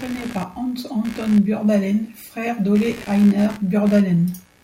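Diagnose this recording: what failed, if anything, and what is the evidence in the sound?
The failure is in the analogue wiring: computer activity noise, present from start to finish under the speech. It is a buzzing, chirping texture that pulses at around 70 Hz and sits roughly 20 dB below the speech, changing with the computer's activity rather than with the speech. Shifting current draw from the processor, graphics card or mouse disturbs a ground shared with the audio input, so that activity leaks straight into the signal path.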